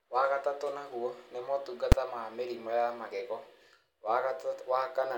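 Invalid numbers at full scale strike at 1.92 s, between "wagatatũ naguo nĩ" and "ma mĩrimũ ya magego". A calculation in the processing chain produced infinite or invalid values, and these were forced to the largest value the format can hold, pinning the output flat at one extreme value, far beyond the speech peaks, for one block of about 5.8 ms, which fits a 256-sample block. That block is so short that the jump into and out of that extreme value merges into a single harsh bang cutting through the speech.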